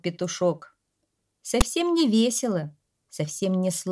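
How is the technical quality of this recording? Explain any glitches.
There's one clear glitch worth flagging. At about 1.61 s there's a very short, hard-edged burst of rasping static, which is file tags played as audio. A block of text metadata got read by the decoder as if it were sample data. Text bytes sit in a narrow range of values, so instead of balanced noise you get a loud, gritty rasp pushed off to one side of zero, starting and stopping abruptly.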